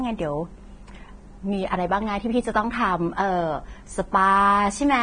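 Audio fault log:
throughout: Vorbis compression, heavy; nothing above about 9.7 kHz, treble coarsely quantised into grainy hiss, likely from a low bitrate near 23 kbps.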